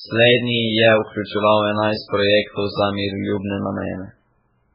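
Across the whole recording the speech sounds watery and swirly, with smeared consonant onsets, the signature of heavy MP3 compression, likely at a very low bitrate near 8 kbps. A spectrogram shows a hard ceiling at 5.3 kHz and patchy high bands flickering between frames.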